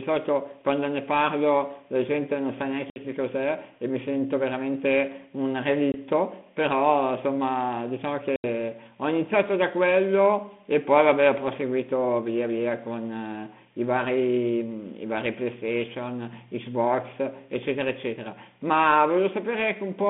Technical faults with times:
2.90-2.99 packet loss on an ADPCM call
5.92-5.96 packet loss on an ADPCM call
8.36-8.45 packet loss on an ADPCM call

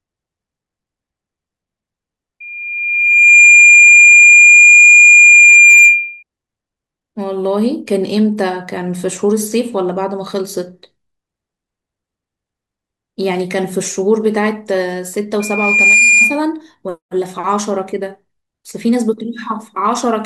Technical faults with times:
2.40-6.23 loudspeaker feedback squeal
15.40-16.40 loudspeaker feedback squeal

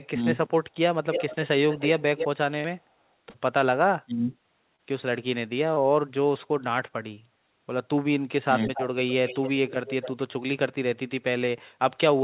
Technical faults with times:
0.11-0.19 speech suppressed in double talk
1.11-2.28 echo leak
2.60-2.66 short concealed packet loss
3.30-3.36 short concealed packet loss
4.05-4.32 speech suppressed in double talk
4.76-4.80 short concealed packet loss
5.74-5.78 short concealed packet loss
7.14-7.18 short concealed packet loss
8.45-8.50 speech suppressed in double talk
8.64-10.11 echo leak

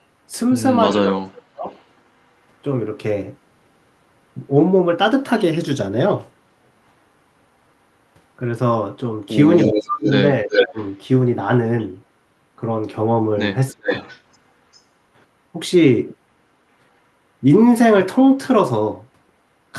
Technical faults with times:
0.92-1.05 echo leak
0.95-1.66 speech suppressed in double talk
1.70-1.84 echo leak
9.63-10.78 speech suppressed in double talk
9.73-10.97 echo leak
13.71-13.90 speech suppressed in double talk
13.86-14.81 echo leak

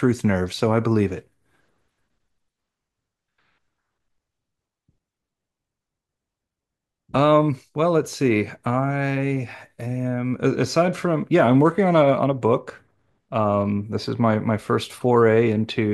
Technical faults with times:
none

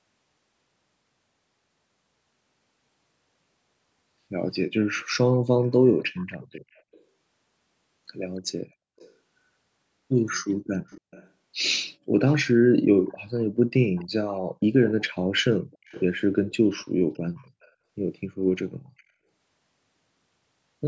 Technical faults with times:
4.98-7.03 echo leak
8.36-9.13 echo leak
10.87-11.30 echo leak
12.26-17.71 echo leak
18.97-19.03 echo leak

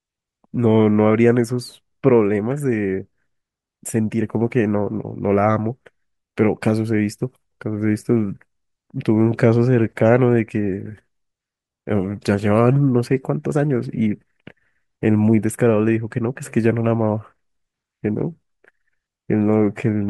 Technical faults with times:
none

